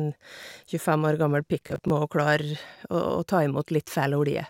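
A speech clip with a burst of processor overload crackle from 1.61 to 1.9 s. The audio turns gritty and torn there. Buffers of around 10 ms missed their deadlines repeatedly, about ten of them. Each miss replayed old audio with hard edges.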